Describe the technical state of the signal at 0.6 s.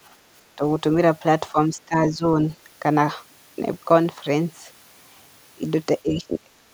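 Clock drift buffer slips run from 0.36 to 5.42 s: a click or pop recurs about every 1.69 s, likely from two mismatched device clocks dropping or repeating small sample blocks. Speech suppressed in double talk hits 0.56 to 0.62 s, with the voice dipping by about 15 dB, likely as the echo canceller ducks both directions during overlap.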